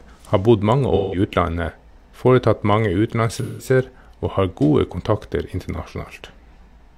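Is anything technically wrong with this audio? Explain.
Yes. Two stretches of the speech show AAC frame loss with concealment: 0.95 to 1.19 s, right after "har bodd mange", and 3.38 to 3.66 s. Each loses about 0.17 s of audio, which fits a run of four frames. The decoder fills each gap by reusing the last good spectrum with randomised signs and interpolated energy, so each comes through as a short smeared, noisy or phasey patch.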